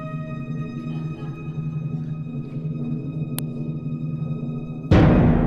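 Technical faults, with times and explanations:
3.39 s, uninitialised buffer: a block of about 0.67 ms, which fits a 32-sample buffer, was sent to the output before any audio had been written into it, so stale memory contents played as samples, producing a brief, loud crack.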